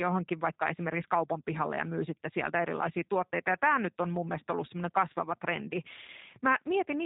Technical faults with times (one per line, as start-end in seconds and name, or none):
0.00-7.05 G.729 codec